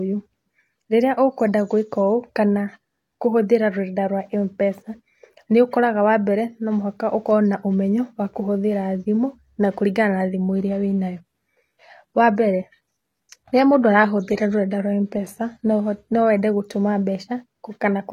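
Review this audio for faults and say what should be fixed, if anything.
From 10.27 s to 16.27 s the speech drops to an adaptive stream at a lower bitrate: swirling codec artefacts rise, consistent with a switch from roughly 96 kbit/s AAC to a low-rate HE-AAC rendition. The change is abrupt, with no gap. Prevent it with a larger playback buffer or a higher minimum rendition.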